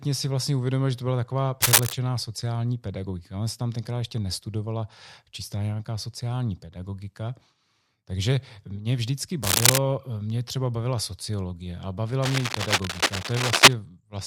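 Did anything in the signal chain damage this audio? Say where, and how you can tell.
Yes. Cable scratch noise, in the analogue wiring. Rough, uneven bursts, louder than the speech, sit at 1.62–1.95 s after "že to byla taková", 9.43–9.79 s after "mě vždycky", and 12.22–13.74 s after "bavila sociologie a bavila". A worn connector being moved likely varied its contact resistance.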